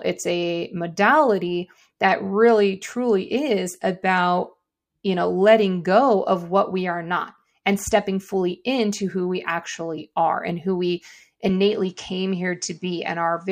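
At 11.49 s, right after "are and who we", the speech turns duller to the end, with nothing above 9.8 kHz and faint new background noise, likely an input switched to a poorer device.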